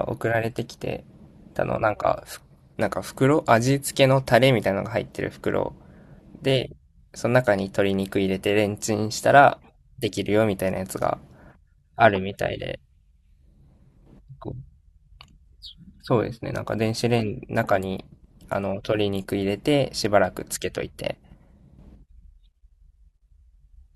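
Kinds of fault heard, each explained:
No technical fault can be heard anywhere in this speech recording. There is nothing here that calls for an entry under any kind of fault.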